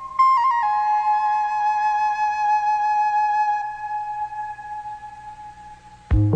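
No technical faults are audible anywhere in the audio.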